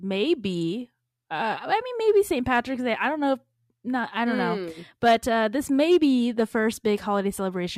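From 1.34 s to the end, sample clock jitter of around a microsecond leaves a faint hiss, roughly 45 dB down, that roughens the louder, brighter speech.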